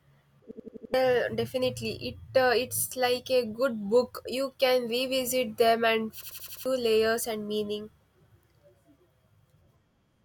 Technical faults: system hang loop

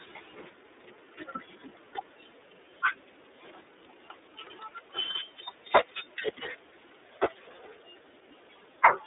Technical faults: iLBC codec

